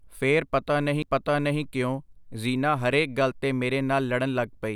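At 1.02 s the speech is broken by a CD skip: a knock or a disc flaw sent the laser onto a different turn of the spiral, so the player muted for about 10 ms and resumed from another spot. It sounds like a small tick followed by an abrupt jump in the speech. On a waveform there is a brief flat gap with a hard edge on either side. A spectrogram shows a thin vertical broadband line where the sound cuts and restarts.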